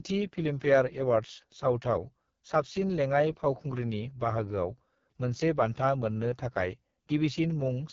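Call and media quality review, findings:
AMR wideband (HD Voice) codec, whole clip: heavily rough, raspy speech, consistent with the lowest 6.6 kbit/s mode. Spectrogram: nothing above 7.5 kHz, smeared harmonics, noise-filled 6.4 to 7 kHz band.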